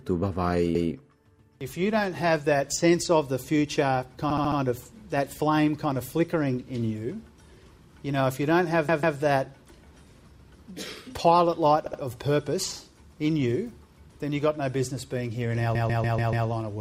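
Repeated frames: a run of compressed frames was written or sent more than once, so the decoder replays the same block and the sound stutters. A 144 ms block repeats once at 0.75 s, a 72 ms block four times at 4.30 s, 144 ms twice at 8.88 s, 72 ms twice at 11.86 s, and 144 ms five times at 15.75 s.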